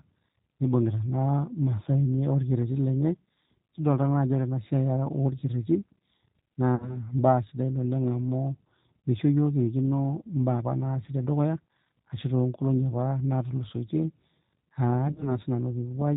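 The whole recording passed through a G.729 codec, which fits the 8 kbit/s G.729A variant. The codec rebuilds the speech from a vocal tract filter, a pitch predictor and a few pulses per 10 ms frame, and it discards everything above 4 kHz. The damage is plainly audible: the speech is muffled and band-limited, with a rough, synthetic edge.

Between 6.76 and 6.98 s, VoIP packets were dropped and the speech codec concealed the loss. About 50 ms of audio went missing, consistent with roughly five lost frames. The decoder filled the gap by repeating its last pitch and filter with shrinking gain, so the sound smears into a buzzy tone or coloured noise that fades. The following frames are built from that guess, so the speech stays weak briefly after the packets return.

From 15.07 to 15.38 s the same packet loss concealment happens again, this time as scattered dropouts. About 70 ms is lost across roughly 140 ms, with no single gap longer than 30 ms. 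Each short gap is patched by extrapolating from the last pitch and filter, giving brief stretches of fading tone or noise. The decoder keeps rebuilding from damaged frames, so the voice stays weak or distorted for a short while after each gap.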